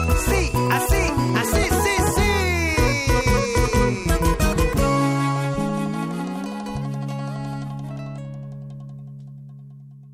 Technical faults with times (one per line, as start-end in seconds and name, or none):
none